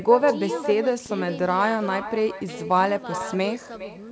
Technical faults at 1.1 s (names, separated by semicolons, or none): echo with no canceller; DC step